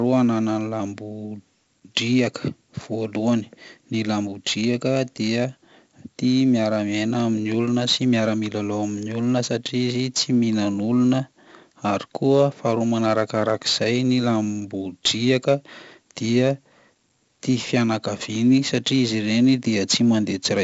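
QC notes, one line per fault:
Throughout, 4-bit ADPCM compression: coarse 4-bit steps leave gritty hiss on loud syllables and crunchy attacks. Nothing above 7.7 kHz, fitting a 64 kbps stream.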